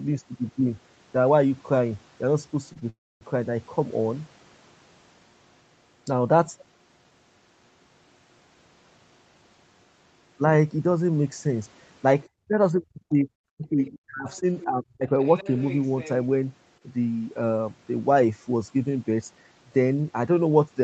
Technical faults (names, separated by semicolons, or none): short stall from a late packet; call audio freeze; speech suppressed in double talk; other side's voice leaking through; jitter buffer speed-up